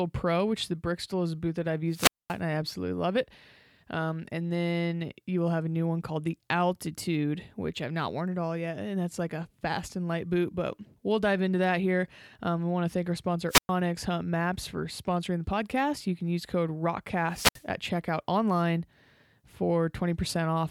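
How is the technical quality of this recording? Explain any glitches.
The recording has three wireless microphone squelch dropouts, at 1.89 to 2.38 s (after "a boot that I've", before "and I absolutely love"), 13.48 to 13.70 s (after "want to thank our"), and 17.29 to 17.66 s (after "can use code", before "at checkout online"). The transmitter's FM signal fades, hiss briefly swells, then the receiver's squelch mutes the output for about 230 ms, 110 ms and 66 ms respectively. On a spectrogram each shows a short broadband haze, then a blank vertical gap. The waveform flattens to near zero before the speech resumes.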